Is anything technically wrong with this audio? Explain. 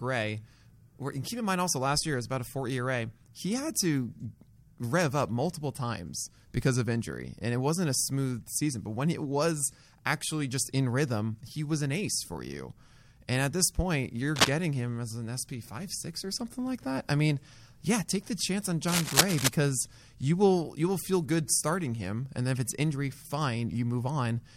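Yes. Three faults are audible in this speech.

At 12.15 to 12.18 s there is a corrupt frame decoded. A single compressed frame was damaged in transmission or storage, and the decoder played it anyway. Misread values put energy at the wrong frequencies for just that frame's length, about 24 ms. It comes through as a brief chirp or blip, peaking at roughly minus 20 dBFS.

From 14.35 to 14.51 s, and again from 18.87 to 19.48 s, there is cable scratch noise. Dense, uneven bursts of rustling sit over the speech. The first burst is short and about 5 dB louder than the speech. The second lasts about 0.6 s and sits at roughly the same level as the speech. The likely cause is a worn cable or connector being moved, so that its contact resistance jumps about rapidly.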